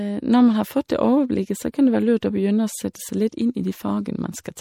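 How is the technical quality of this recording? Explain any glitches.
Quality's noticeably compromised: the speech carries plainly audible coding damage from start to finish. It sounds like MP3 compression, likely at a low rate, something that fits around 64 kbps. Short on bits, the encoder lops off the treble and keeps dropping weak frequency lines from frame to frame, so the speech comes across dull, a bit watery and swirly, with metallic chirps on the s sounds and smeared attacks.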